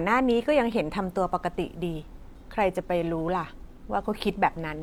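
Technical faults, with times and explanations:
No technical faults can be heard anywhere in this speech recording, and the signal stays steady and continuous the whole way through.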